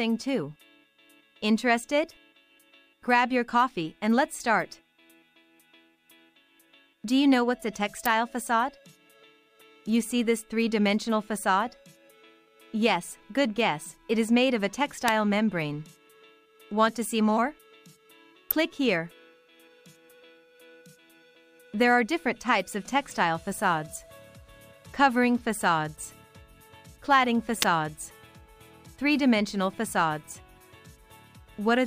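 Sharp snaps land at 8.06, 15.08, 18.51 and 27.62 s, each peaking around -5 dBFS. These are electrical switching spikes, likely nearby switching arcs picked up by the audio line.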